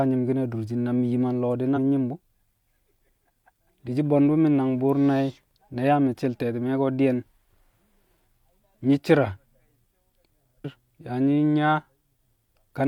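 At 1.73–1.78 s, between "yim a nlo̱o̱ di̱" and "mi̱ nyi̱m bu̱", and again at 10.60–10.65 s, damaged data in the compressed stream makes the decoder lose sync, producing brief glitches. Each shows as a jagged waveform discontinuity.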